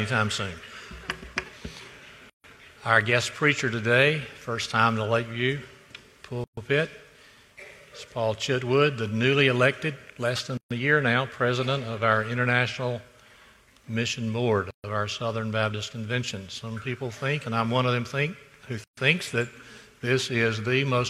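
Gaps at a join of encoded pieces open at 2.30, 6.44, 10.57, 14.71 and 18.84 s. The first lasts 143 ms and the rest 133 ms each. The sound runs in roughly 4-second stretches, then drops out. Each piece was likely encoded on its own and joined untrimmed, leaving the encoder's start delay and last-frame padding in place. The cut-outs have smeared edges, and the sound resumes where it stopped.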